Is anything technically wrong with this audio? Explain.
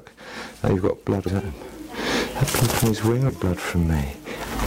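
Yes. Two kinds of fault are present.

Hard clipping runs through the whole clip. The signal was driven about 11 dB past what one stage could pass, so its peaks were sliced flat. Roughly 3 percent of samples hit that ceiling. Flattened tops create extra harmonics high in the spectrum. The result is distortion riding on the louder moments. It does not come and go. It colours every loud passage from start to end.

Damaged data in a compressed stream occurs twice: from 1.24 to 1.29 s, and from 3.26 to 3.30 s. Each event lasts about 44 ms. Part of the encoded data there was corrupted. The decoder misread or rejected those frames and lost sync. It then had to hunt for the next valid frame header. Each spot is a brief disruption in the sound, such as a chirp, squawk, click or short gap.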